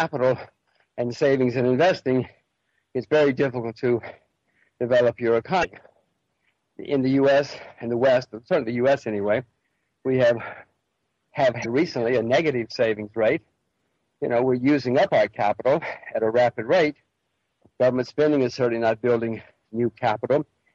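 Damaged data in the compressed stream at 5.61 to 5.65 s and 11.61 to 11.66 s leaves the decoder losing frame sync, breaking the sound for about 44 ms each time.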